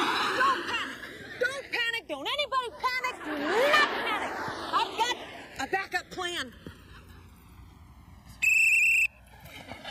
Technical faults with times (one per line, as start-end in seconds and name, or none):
0.00-9.91 channels drifting apart